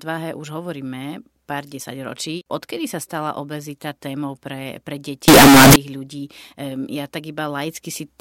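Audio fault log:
5.28 to 5.76 s, signed and unsigned mixed up: right after "obezita témou pre pre" the speech turns into a blast of loud, harsh distortion for about half a second. The likely cause is 16-bit samples read with the wrong sign convention, which flips the top bit so every zero crossing leaps across the full range. Unlike clipping, which flattens only the peaks, this makes quiet stretches as loud as everything else.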